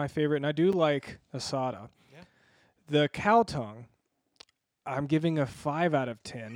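At 0.73 s, just after "favorite and I do", a block of digital silence of 5.8 ms, consistent with a 256-sample buffer going unfilled, cuts the speech abruptly and produces a tick or dip.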